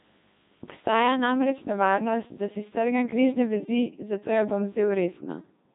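Throughout, the speech carries heavy Codec 2 vocoder damage, consistent with a 2.4 kbit/s mode. Rebuilt from sine waves, it sounds robotic and buzzy, with nothing above 3.8 kHz.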